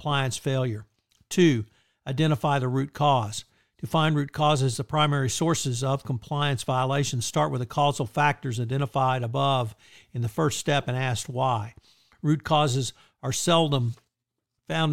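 Nothing in the recording stood out as a technical problem on listening.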